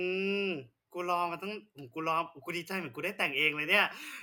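Nothing in this short speech recording points to a technical fault at any point.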